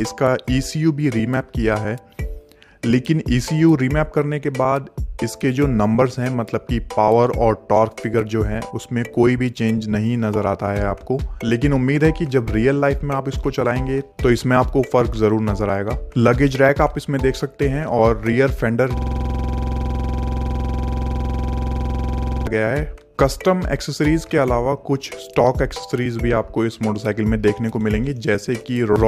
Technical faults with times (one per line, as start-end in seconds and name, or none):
18.97-22.47 system hang loop